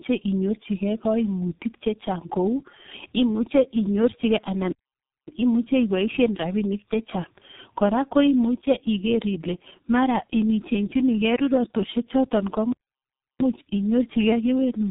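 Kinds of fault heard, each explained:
Tandem speech coding, throughout: the speech was decoded and re-coded by two low-rate speech coders in turn, each working on the last one's damage. It sounds rough, warbly and muffled, with nothing above 3.8 kHz, which fits a final G.723.1 stage.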